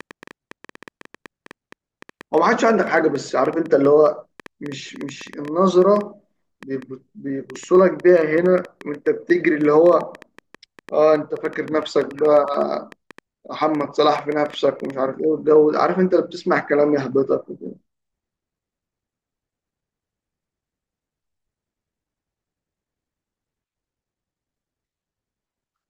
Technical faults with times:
0.00-14.91 train of clicks

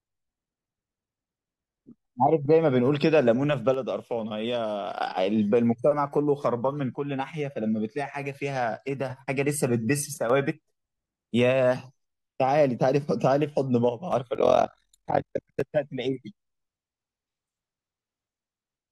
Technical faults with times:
3.74-4.97 one channel drops out
6.96-9.10 one channel drops out
10.14-10.30 one channel drops out
13.89-14.13 one channel drops out
14.35-15.62 overlap-add ripple

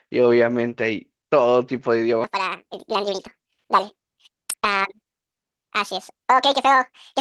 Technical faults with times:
1.77-1.83 lost packet rebuilt from error correction
2.24-7.21 section at the wrong speed
3.13-3.27 lost packet rebuilt from error correction
4.51-4.65 lost packet rebuilt from error correction
4.55-4.63 short concealed packet loss

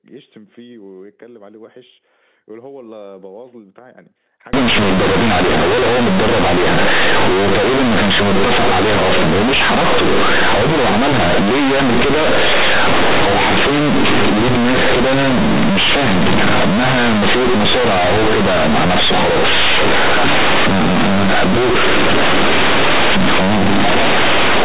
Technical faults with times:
4.53-24.65 companded audio read as linear

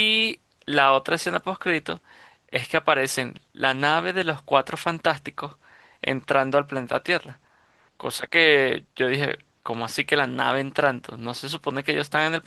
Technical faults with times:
none

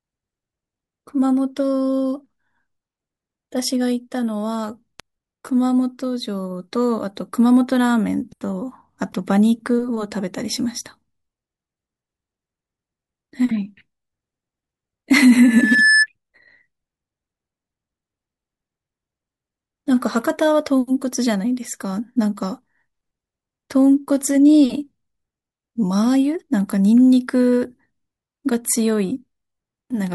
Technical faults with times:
15.39-16.07 loudspeaker feedback squeal

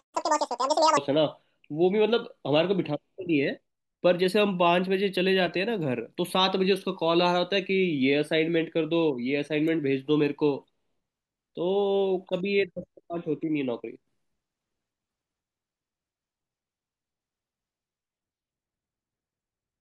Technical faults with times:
0.00-0.97 audio read two samples at a time (double speed)

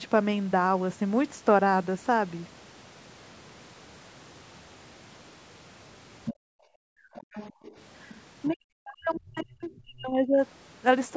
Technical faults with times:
6.25-6.34 other side's voice leaking through
6.34-7.64 background gated by the echo canceller
7.15-7.77 other side's voice leaking through
8.09-8.54 other side's voice leaking through
8.48-10.42 speech suppressed in double talk
9.15-9.81 other side's voice leaking through

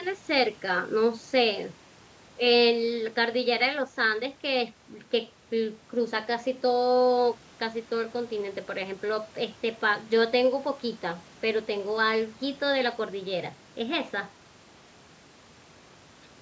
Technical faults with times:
none

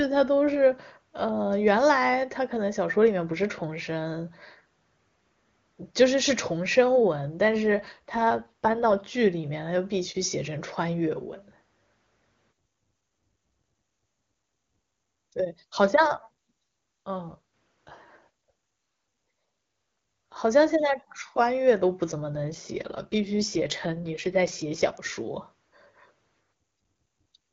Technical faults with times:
7.64-9.08 AMR rate drop
22.11-24.98 AMR rate drop

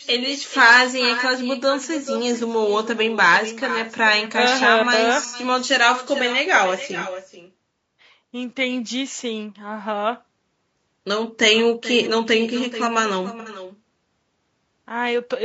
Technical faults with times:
0.00-15.44 echo with no canceller
0.00-15.44 low-delay AAC compression
5.27-5.36 AAC frame loss with concealment
13.40-13.49 AAC frame loss with concealment

